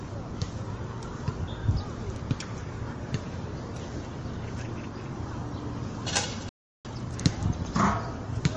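From the start, the whole recording has a plainly audible MP3 compression character, likely from encoding at a low bitrate, with damage that fits something near 40 kbps. The detail has a watery, swirling quality where weak frequency components drop in and out. A spectrogram would show patchy, flickering blocks of energy across the full clip instead of smooth texture.

At 6.49 s the sound cuts off mid-flow and stays silent until 6.85 s, a gap of about 0.36 s. This is a playback stall, and its likely cause is the player running out of data or being held up before it could recover. On a waveform it appears as a flat line with abrupt edges. A spectrogram would show a clean vertical band of silence across every frequency.

Immediately afterwards, from 6.85 to 7.19 s, the audio comes back as a time-compressed catch-up. It runs at twice normal speed while keeping its original pitch. The player achieves this by removing short slices and cross-fading across the joins, which makes the sound rushed. 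A waveform would show events packed closer together, and a spectrogram would show a horizontally squeezed stretch with its frequencies unchanged.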